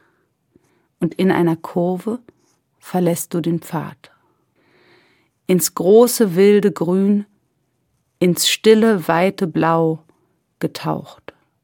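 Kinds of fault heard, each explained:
No technical fault can be heard anywhere in the signal, which keeps continuous playback throughout.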